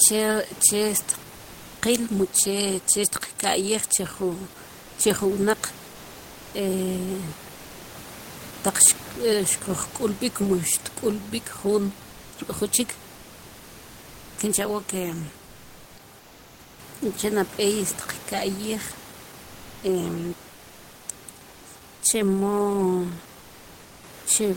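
From 16.19 to 16.79 s and 19.43 to 19.83 s, comfort noise replaces the background: steady, featureless hiss, about 3 dB quieter first. Discontinuous transmission is the likely cause.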